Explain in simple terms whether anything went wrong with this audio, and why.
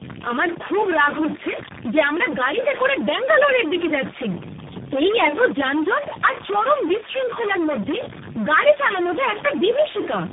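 Yes, several things went wrong, and all of them last the whole clip, from start to finish.

First, the speech is distorted. Even the pauses between words are not silent. They fill with a gritty noise. This is the sound of a stuck bit. The likely cause is one digital bit frozen at a fixed value, from a broken wire or converter. About half of the samples come out wrong by that bit's amount, so the error follows the waveform and never stops.

Second, there is a steady low buzz under everything, at about 92 Hz. That is a block size mismatch (truncated). Audio moves in small chunks. Here one stage hands over chunks a little longer than the next stage takes. The leftover end of each chunk is dropped. Those regular cuts, about 92 times a second, make the buzz. The drops are so small that the speech keeps its normal speed and pitch.

Third, the voice sounds rough, muffled and warbly. Nothing is heard above about 3.7 kHz, so the crisp top of the sound is gone. 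This comes from tandem speech coding. The call crossed four speech coders in a row. The first was a type called CVSD. At each border the audio was unpacked and squeezed again. Every coder worked on damage the previous one had left, and the flaws stacked up.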